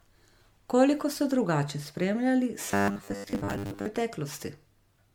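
Across the whole speech clip there is generation loss: swirly, hollow smearing and blurred attacks, more than a single 96 kbit/s MP3 would cause, likely from about five successive re-encodings. From 2.65 to 3.86 s, right after "ste drugače spremljali", the speech becomes a robotic buzz at a fixed 100 Hz, likely from repeated 10 ms buffers filling in for most of the skipped audio. Unlike a simple dropout, the sound keeps going rather than falling silent.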